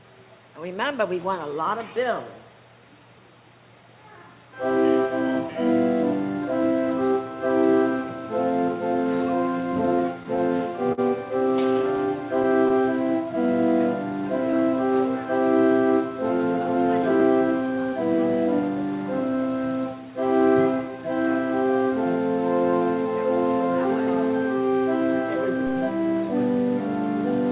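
From 9.96 to 11.0 s, repeated stalls (stutter): the jitter buffer ran dry five times, the longest 50 ms, and the receiver stretched the last sound, so nothing is lost but the audio drags. Scattered short gaps between 11.82 and 12.72 s bring about four tiny concealed holes, each around 15 ms or less, heard as brief ticks and smears. Overlapping these, a jitter buffer slow-down from 12.07 to 13.48 s repeats pitch periods to add 48 ms, so the sound plays at 97% speed with unchanged pitch. Throughout, the 4 kHz band limit points to a G.711 mu-law call path.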